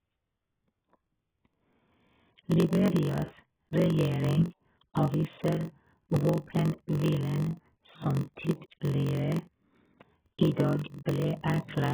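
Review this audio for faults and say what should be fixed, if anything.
AAC compression, throughout: the speech is dull and smeared, with a warbling, fizzy texture on sibilants and held sounds. This is likely heavy AAC-LC coding at a very low bitrate, around 8 kbps, stripping and patching spectral bands. Encode at a higher bitrate, or keep the audio uncompressed until final delivery.

Block size mismatch (padded), throughout: a steady 46.9 Hz buzz runs under the speech, and the audio plays at 0.938 times normal speed. One stage writes shorter blocks than the next reads, which fits 1,024-sample reads, so zeros fill every gap. Match the block sizes that adjacent stages write and read.

Pre-echo, 10.53 to 10.57 s: a short hiss of about 33 ms precedes a sharp attack, which sounds softened. The attack falls late in a codec block, and noise scaled for the loud part spreads back into the quiet moment before it. 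Use an encoder with block switching for transients, or a higher bitrate.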